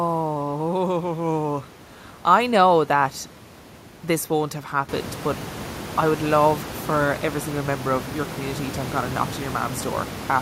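No technical faults are audible.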